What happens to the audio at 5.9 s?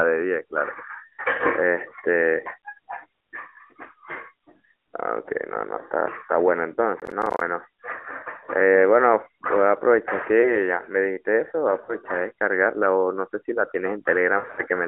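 Nothing goes wrong at 5.9 s; the speech carries straight through that moment with no dropout, glitch or other fault, just the narrowband mobile-codec sound that runs through the clip.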